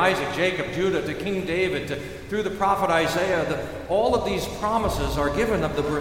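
From 4.50 s to the end of the clip at 6.00 s, a steady ticking sits under the sound at a little under ten clicks per second. This is Wi-Fi interference: a nearby wireless radio's beacon transmissions, repeating every 102.4 ms, are being picked up by the audio circuitry and rectified into audible pulses. The ticking stays well below the main signal, roughly 25 dB down, and holds a regular rhythm throughout.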